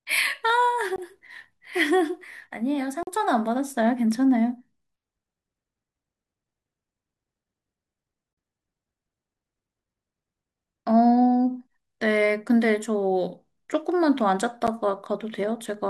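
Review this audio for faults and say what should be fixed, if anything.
The speech drops out to digital silence four times. There are short holes at 0.96 to 0.98 s, 3.03 to 3.07 s and 8.33 to 8.37 s, and a brief tick at 14.67 s. Each block of digital silence cuts in and out with no fade. The holes last about 21, 43, 43 and 11 ms. Those lengths fit whole buffers of 1024, 2048 and 512 samples that were not filled in time. To prevent this, give the audio processing more headroom, with larger buffers or lighter load, so every buffer is ready before its deadline.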